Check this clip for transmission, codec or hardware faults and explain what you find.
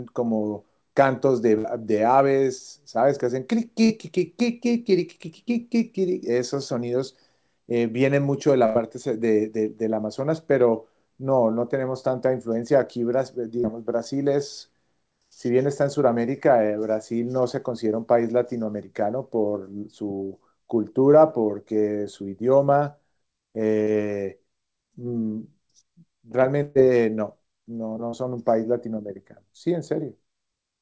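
Two kinds of packet loss appear in this speech, passed through a call codec with nothing above 8 kHz, which fits G.722.

Burst of packet loss at 1.58–1.67 s, 8.66–8.78 s and 26.63–26.78 s. Lost packets were concealed by extending and fading the last sound. About 60, 90 and 120 ms go missing.

Short concealed packet loss at 3.86–3.93 s, 13.61–13.67 s, 23.84–23.90 s and 28.10–28.16 s. Roughly 30 ms was patched from preceding audio, heard as a brief smear or wobble.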